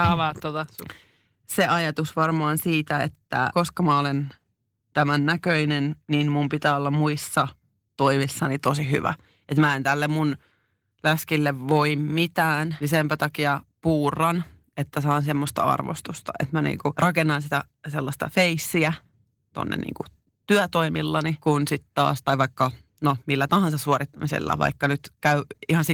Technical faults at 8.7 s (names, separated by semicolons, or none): none